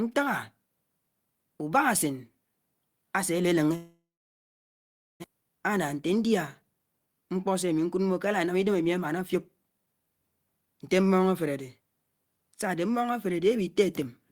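At 3.75 s the speech cuts out and doesn't return until 5.26 s. There's a brief fading buzz carried over from the last sound, then roughly 1.2 s of silence. When the speech resumes, about a second of it is simply gone. That's the signature of a long network dropout: the likely cause is packets not arriving at all, with the receiver covering the gap as best it could before giving up and going quiet.

Right after, from 5.34 to 10.01 s, you get the jitter buffer speed-up. The receiver had built up extra delay, probably from the late packets landing together, so it trims tiny pitch-period slices over and over to catch up. Speech runs at about 110% speed with the pitch unchanged, sounding a bit hurried. In total, roughly half a second gets shaved out.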